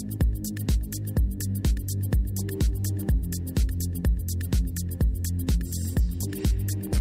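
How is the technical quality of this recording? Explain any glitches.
Nothing to flag here: the recording runs without any glitches, so there's no fault to explain.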